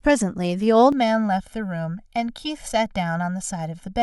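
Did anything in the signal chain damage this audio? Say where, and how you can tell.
Yes. From 0.92 s to the end of the speech, one channel runs late relative to the other by roughly a millisecond and a half, and the pair is then summed to mono, a timing slip at the driver or buffer stage. That produces channel delay (comb filtering): the shared signal cancels at evenly spaced frequencies, the first notch falling near 400 Hz, so the voice turns hollow and phasey with fixed spectral gaps.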